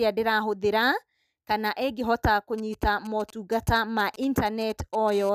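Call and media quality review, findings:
GSM signalling bursts, 2.58 to 5.10 s, right after "kana ĩngĩhota". Galloping dit-dit-dit ticks and short buzzes at 217 Hz, roughly 20 dB under the speech. Nearby 2G handset signalling. Its radio bursts are rectified in the audio path.

GSM phone buzz, 5.12 to 5.30 s. Hard, raspy, continuous 217 Hz buzz, harmonic-rich, about 19 dB below the speech. Nearby 2G handset, transmitting steadily as in a call. Unrelated to the speech. Audio circuit rectifying the RF pulses.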